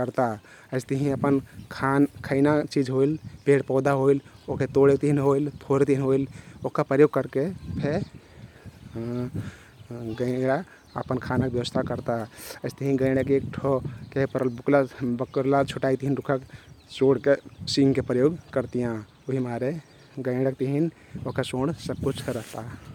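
Nothing goes wrong anywhere in this bit of speech, so there's no technical fault to point out.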